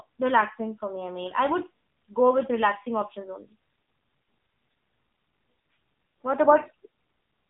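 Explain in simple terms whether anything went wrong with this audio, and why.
The AMR narrowband mobile codec affects the speech for the whole clip, from start to finish. This is the squeezed format older mobile phone calls use. It keeps only a narrow slice of sound, roughly 150 Hz to 3.7 kHz, and nothing above about 3.8 kHz gets through, so the voice sounds muffled and boxy. The codec also rebuilds the voice from a simple model rather than storing it faithfully, which leaves a plainly audible buzzy, synthetic edge.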